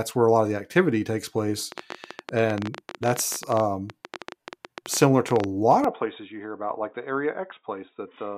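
From 1.72 s to 5.45 s, something in the chain injects a train of clicks, most likely electrical interference or a faulty connection or power supply. Around fifty pulses arrive at about 14.8 per second, spaced unevenly rather than in a steady rhythm. Each peaks roughly 10 dB above the speech, so the clicks sit clearly on top of it as a ragged ticking or popping that continues through the pauses.

At 5.84 s the input switched to a poorer device, likely a change of microphone or a headset dropping into its call profile. The new path passes nothing above 3.8 kHz and there is no gap at the change. The speech suddenly turns dull and boxy and drops about 5 dB in level. A faint new background noise, far below the speech, comes in with it and continues to the end.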